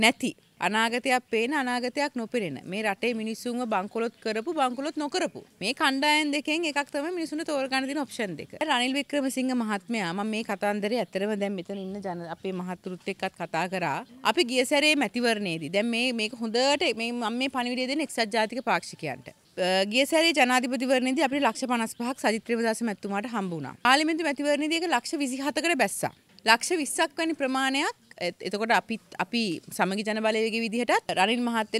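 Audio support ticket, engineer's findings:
No audible faults found; no action required.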